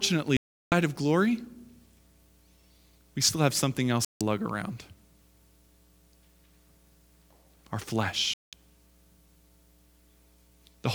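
Three digital broadcast dropouts hit this speech: at 0.37 s for about 0.36 s, at 4.05 s for 0.16 s, and at 8.34 s for 0.2 s. Each time the receiver lost clean frames and muted, so the sound goes silent and resumes further on, with that stretch gone.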